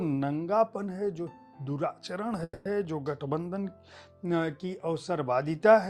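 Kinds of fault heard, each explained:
Call audio freeze: At 2.43 s the sound stalls. For about 220 ms the last bit of audio is stretched into a fading buzzy tail, with roughly 40 ms of silence before things pick up again at 2.67 s. Nothing's actually lost; the audio just resumes where it stopped, now running about 220 ms later than before. That's likely packets getting held up in transit and the jitter buffer running dry, so the receiver padded the wait.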